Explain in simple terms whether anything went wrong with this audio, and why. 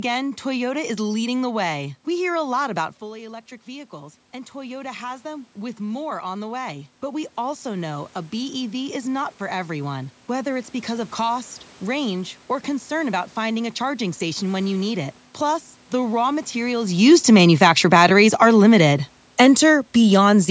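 Two things went wrong, both from the automatic gain control, which adjusts the volume on its own.

The first is automatic gain rising. Around 3.0 s, just after "lot about", the talker moves away and the voice drops. The system notices the quieter input and slowly turns itself up, from 2.99 s to 11.15 s. Voice and room noise swell together over those eight seconds. The volume creeps upward instead of staying steady.

The second is automatic gain falling. Around 17 s, just after "the raw materials", the talker comes closer and the voice gets louder. The system then turns itself down gradually, from 16.93 s to 20.46 s. The voice starts out loud and then sinks, and the background sinks with it. That shared fade gives away the volume control at work.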